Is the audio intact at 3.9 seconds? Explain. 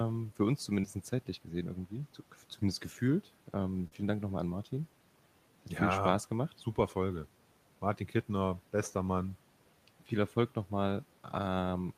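No. Between 3.88 and 3.93 s there's a short concealed packet loss. About 40 ms of the speech never made it to the decoder in time, so the receiver bridged the hole by stretching the preceding sound, then blended back, leaving a brief smear or wobble.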